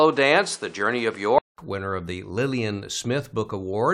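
From the start to 1.58 s, the speech has nothing above 10.8 kHz and carries its own noise floor, around 30 dB below the signal. At 1.58 s a gap of about 0.2 s falls just before "winner of the." After it the full band returns, along with a level shift of around 5 dB. The likely cause is the input switched to a poorer device, whose narrower band, noise and gain differ from the main microphone.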